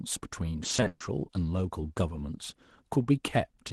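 From 0.63 to 1.01 s, repeated packet loss produces robotic, choppy speech. Eight gaps, the longest 130 ms, are patched by extending prior sound, concealing roughly 58% of that stretch.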